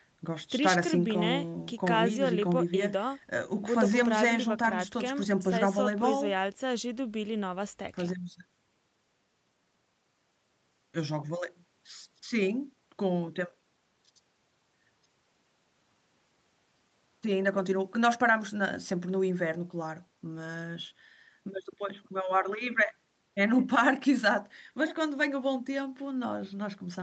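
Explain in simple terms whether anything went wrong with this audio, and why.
Nothing went wrong with this speech recording. It passed through the usual microphone processing of a call, which trims away the very lowest bass and leaves nothing above 8 kHz, and that is how such a call normally sounds.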